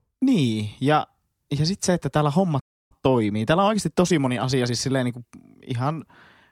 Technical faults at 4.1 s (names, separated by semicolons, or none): time-compressed catch-up